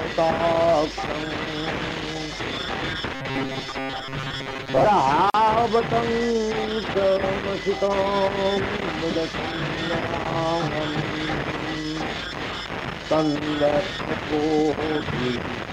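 Robotic sound from repeated short buffers, 3.14 to 4.85 s: a rigid metallic buzz at 134 Hz, likely from audio arriving late and a roughly 7.5 ms buffer being replayed. Gap at a join of encoded pieces, 5.30 to 5.34 s: a 42.5 ms silence with smeared edges, where padding from separately encoded sections was left untrimmed.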